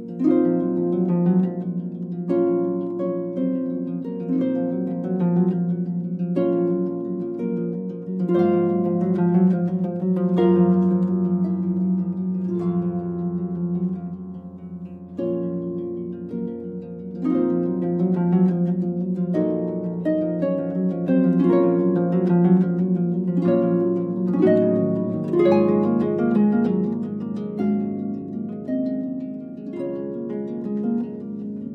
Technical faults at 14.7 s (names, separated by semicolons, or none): none